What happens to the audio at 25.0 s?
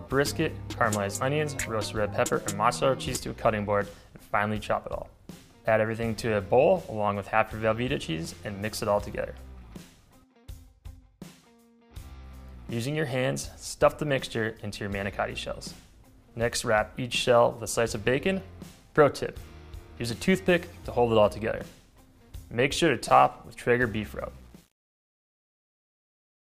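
The fade-out sounds gritty. This is truncation distortion from 24.29 s to the end: the fade keeps too few bits, which fits about 9-bit resolution, with no dither.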